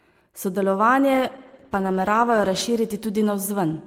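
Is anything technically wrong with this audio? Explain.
Yes. From 1.14 to 2.69 s there is a call bitrate drop. The sound suggests the encoder's rate fell from roughly 40 kbps to about 13 kbps, leaving coarser coding that sounds muffled and watery. On a spectrogram, the upper bands vanish above a lowered cutoff until the rate recovers.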